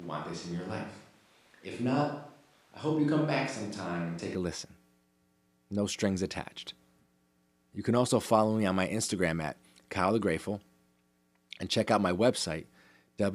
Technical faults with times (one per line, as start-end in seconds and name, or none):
0.00-4.35 switch to a distant microphone